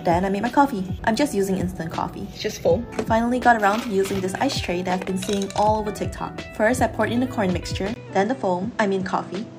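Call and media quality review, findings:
7.94 s to end of clip (9.59 s): brief dropout, about 20 ms, then band-limited, duller audio with nothing above 8.7 kHz and a new noise floor roughly 30 dB under the signal. Level roughly unchanged. Likely cause: input switched to a poorer device mid-capture, narrower response and different self-noise.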